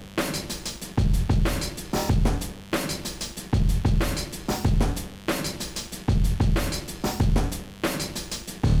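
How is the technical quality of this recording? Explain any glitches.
The recording is marred by one fault, and it runs the whole way through. A mains buzz sits under the sound from start to finish. Sharp switching spikes leak in twice per 50 Hz cycle, stacking harmonics up to several kHz. The result is a steady, raspy buzz, roughly 25 dB below the main sound.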